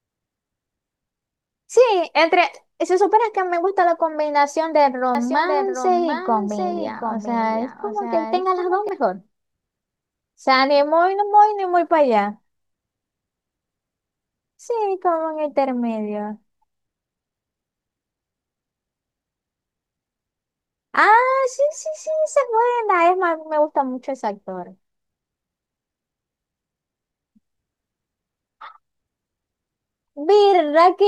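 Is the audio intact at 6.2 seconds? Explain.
No. From 5.15 to 8.89 s the speech is heard twice: a clean copy about 5 dB quieter trails roughly 0.7 s behind, starting and stopping abruptly. This doubled audio track likely comes from a second, slower capture path mixing the same signal in late.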